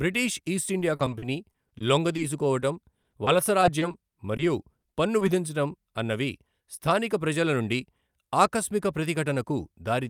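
From 0.79 to 2.20 s the speech breaks up with repeated packet loss, giving a robotic sound. Nine gaps, the longest 40 ms, were each patched by extending the last sound, so about 15% of that stretch is concealment. It sounds choppy. A spectrogram shows smeared, flattened harmonics broken by short seams. The same fault returns from 3.03 to 4.41 s, with eight gaps of up to 30 ms.

At 4.81 s there is a short stall from a late packet. The jitter buffer emptied, and the receiver held the last sound for 20 ms until the packet came, then carried on from the same place. Nothing is lost, but one sound lingers with a faint buzz or dip. The waveform shows a brief repeated cycle there.

Short concealed packet loss follows at 4.93 and 5.19 s. Each time about 20 ms never reached the decoder and was filled by continuing the previous sound before blending back. Both are heard as quick smears or wobbles. 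On a spectrogram each appears as a thin vertical band of blurred, repetitive energy.

From 7.52 to 7.85 s a jitter buffer speed-up trims pitch-period-sized slices, roughly 40 ms in total. That stretch plays at about 109% speed with unchanged pitch and sounds hurried. The waveform shows compressed timing without any gaps.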